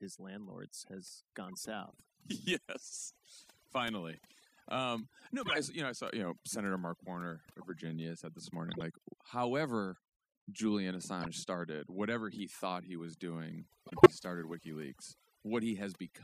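Across the whole speech recording, overdone noise removal leaves a near-silent background with twinkling specks; the spectrogram shows isolated bins flickering in black gaps. Corrupt frames decoded at 1.49–1.65 s (after "landlords has"), 5.45–5.57 s, 7.49–7.66 s, 11.21–11.27 s and 13.87–14.11 s (after "thought he was doing") put energy at wrong frequencies. These sound like chirps and squeaky bursts and appear as stray blocky patches. The loudest, near 14 s, peaks at about -10 dBFS. At 8.64–8.83 s, after "said this", compressed frames were skipped, losing a few tens of milliseconds. The audio jumps ahead by that much.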